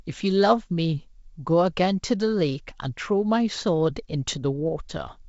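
Nothing in this speech stands out as a fault; it comes across the way wideband G.722 telephone coding at 64 kbit/s normally does, with the audio reaching up to about 7 kHz.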